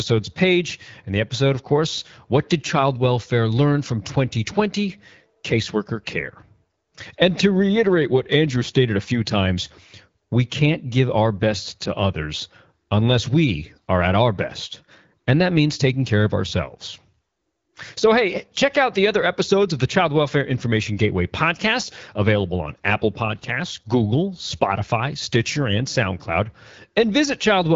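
No technical faults are audible.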